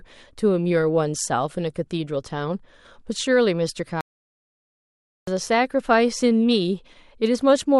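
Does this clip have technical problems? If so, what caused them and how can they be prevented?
Yes. The player most likely ran short of buffered data, or its audio thread was held up, so nothing reached the output for about 1.27 s. In this speech clip that is a playback stall from 4.01 s to 5.27 s: the speech stops abruptly mid-flow, the output falls completely silent, and the speech then resumes after the gap. A larger playback buffer and a high-priority, non-blocking audio thread would prevent this.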